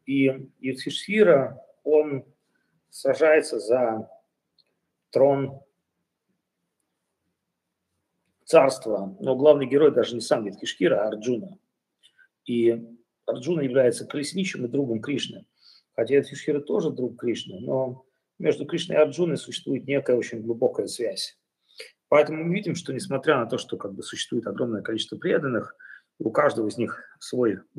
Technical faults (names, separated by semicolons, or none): none